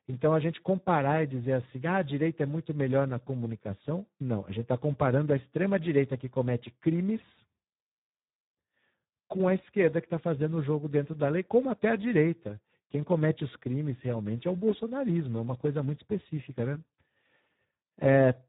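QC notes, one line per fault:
Throughout: Speex codec. The speech sounds hoarse and grainy for the whole clip. This low-rate CELP coding has very few bits left for the excitation signal, so voicing turns rough and buzzy instead of natural. The damage is heavy, which fits a rate near 8 kbps. Nothing is heard above about 3.8 kHz, so the sound is narrowband and dull, with no air or sibilant detail.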